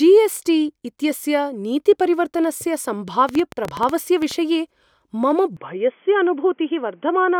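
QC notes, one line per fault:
3.29–4.32 s, train of clicks: a burst of about ten sharp ticks at roughly 9.8 per second, unevenly spaced, popping out about 10 dB above the speech and landing in the gaps too. Because they keep much the same shape and arrive in a tight cluster, it's likely something injecting pulses from outside, such as nearby equipment interfering or a faulty connection or power supply, rather than anything in the talker's delivery.
5.57 s to end, input switched to a poorer device: the speech suddenly turns thin and boxy, with nothing left above 3.4 kHz, and there's no gap at the changeover. Loudness stays about the same, but a faint new noise floor comes in, roughly 45 dB under the speech. A hard top at 3.4 kHz is the classic telephone band, so the recording most likely jumped to a headset's call profile or a cheaper mic mid-take.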